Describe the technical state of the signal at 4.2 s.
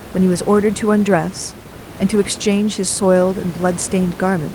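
At 4.2 s the speech is intact, with only the room's own background noise sitting about 14 dB below it.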